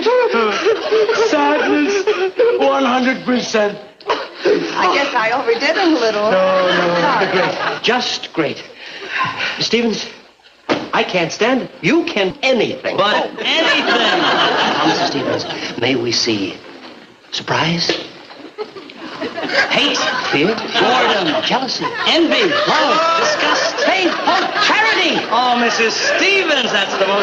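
At 12.30 s the audio skips ahead: roughly a third of a second of sound was dropped while later audio was already queued, so playback jumps straight to it with no fill. The two sides of the cut butt together, producing an abrupt discontinuity.

From 15.80 to 16.41 s a jitter buffer speed-up occurs: the buffer was holding excess audio, so short pitch-period segments were trimmed repeatedly, removing a few tens of milliseconds in total. Playback runs at about 105% speed at unchanged pitch, sounding slightly hurried.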